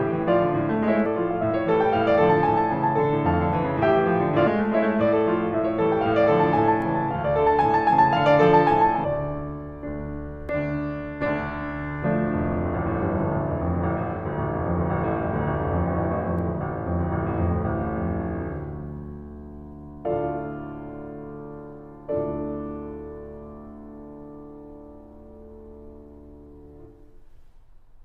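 At 1.05, 4.46 and 9.03 s the music gives short blips from damaged data in the compressed stream, where the decoder misreads corrupted frames and briefly loses sync.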